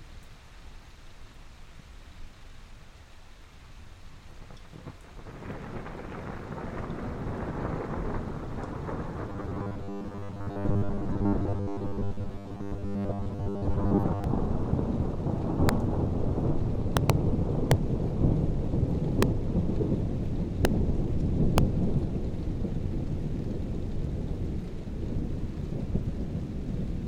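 Robotic sound from repeated short buffers runs from 9.30 to 14.24 s: the everyday sound turns into a rigid, metallic buzz at 100 Hz that only roughly follows the original. This likely comes from audio arriving too seldom, so a 10 ms slice is replayed over most of that stretch while the real audio is skipped.

Integer overflow follows at 15.69 s, 16.97 to 17.10 s, 17.71, 19.23, 20.65 and 21.58 s. Peaks exceed the limit by about 2 dB or less and wrap to the opposite sign instead of being held, so each one gives a crack far sharper than clipping.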